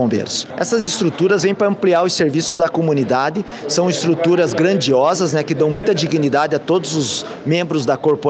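At 0.79 to 0.90 s there is a burst of packet loss. About 80 ms of audio failed to arrive, and the receiver extended the last sound while fading it, so a held buzz or decaying hiss stands in for the missing material. Playback then picks up further along. The same fault recurs at 2.47 to 2.62 s and 5.71 to 5.86 s, each time with about 120 ms lost and concealed with no outright silence, giving a longer smeared hold before the jump.

Between these, at 3.47 to 3.54 s, a short concealed packet loss of about 40 ms is filled by continuing the preceding sound and crossfading back into the real signal. It registers as a brief smear or wobble, and any short transient in that window can disappear.

All of this rides on the WebRTC call path, whose Opus coding shows as a top end cut off near 8 kHz, with the bitrate at 48 kbps.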